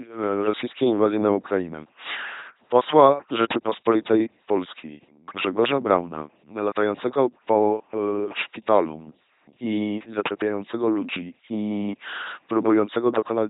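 This speech clip runs through an LPC-10 vocoder for its full length. The voice becomes a buzzing, mechanical robot sound, since each moment is rebuilt as either pulse-driven or noise-driven. Heavy damage and nothing above 3.9 kHz fit LPC-10's 2.4 kbit/s rate.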